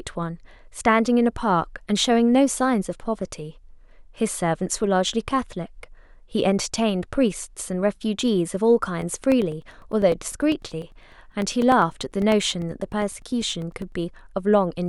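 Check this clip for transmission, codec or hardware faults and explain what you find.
One hardware fault is present: periodic USB or driver dropouts from 9.02 to 13.92 s. Every 0.1 s, a background task stalls the audio path and a couple of milliseconds of speech become silence. About fifty evenly spaced ticks result, appearing as regular waveform gaps and vertical broadband stripes on a spectrogram.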